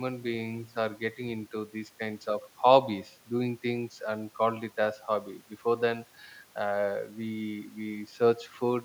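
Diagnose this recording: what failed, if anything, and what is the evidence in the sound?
Nothing failed here: listening along the whole speech recording, no stage in the chain leaves any trace that would point to a problem.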